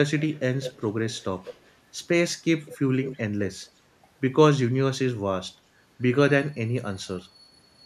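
Echo leak appears at 0.19, 0.63, 1.07, 1.44, 2.65 and 3.02 s. Each time a copy of the speech trails it by about 0.2 s, in short scraps. The loudest scrap is at 0.63 s. This is likely an echo canceller letting loudspeaker sound back through.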